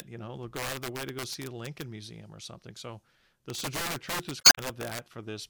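Integer overflow hits at 0.00 s, a single instant pushed about 1 dB past the top of the integer range. Instead of being limited, the sample wraps to the opposite extreme and produces a sharp crack. The same fault returns from 0.56 to 1.82 s, just after "know they'll", with peaks about 6 dB over the limit. It comes back more severely from 3.50 to 4.99 s, at about 8 dB. On every loud peak in these spans the waveform flips across its full range, which sounds like violent snapping that is far harsher than clipping.

Damaged data in a compressed stream appears at 1.29 s, inside the first overflow span. Corrupted bytes make the decoder misread a frame and lose sync, so a brief glitch cuts through the sound. A longer stretch of corruption runs from 4.38 to 4.59 s. There the decoder hunts for the next valid frame header, and the resynchronisation inserts roughly 8 ms of extra time.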